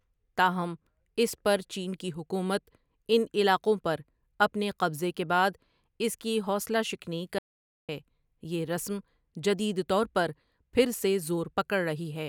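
At 7.39 s, just after "اس کی حوصلہ شکنی", the speech cuts off abruptly into an audio dropout to silence lasting about 0.5 s, until 7.89 s. The gap is silent, with no room tone or background beneath it, and the speech resumes mid-flow. This likely reflects a momentary loss of the input signal, such as a link failure or brief mute, while recording continued writing silence. Whatever was spoken in that half-second is lost.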